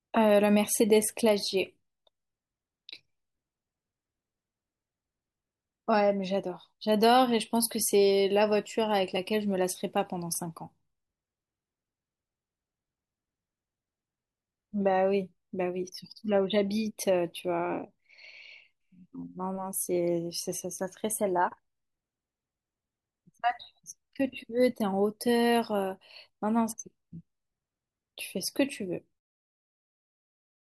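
Nothing here calls for a fix, and the gentle fade-out that begins around 29 s and finishes at 29.21 s is just a tidy editorial ending.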